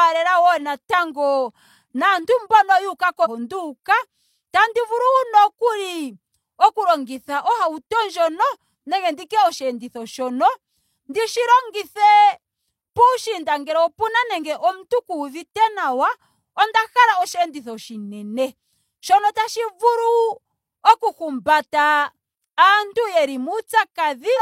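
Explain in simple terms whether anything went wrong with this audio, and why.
Two short glitches come from damaged data in a compressed stream, at 3.21 to 3.27 s and 24.34 to 24.39 s. Corrupted bytes there make the decoder misread the speech data and lose its place, producing brief glitches until it locks back on.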